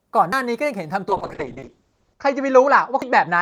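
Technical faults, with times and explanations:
0.33, 1.63 and 3.02 s: dropped buffer (overrun). Each is a sudden jump in the speech with no gap. Roughly 50, 100 and 150 ms are missing, likely because samples were overwritten before the program read them.
1.09–3.41 s: call bitrate drop. The encoder falls from 32 to 7 kbps, and the bandwidth narrows from 20 kHz to 8 kHz. The speech turns muffled and rough. It stays at the lowest rate for 1.15 s and does not recover.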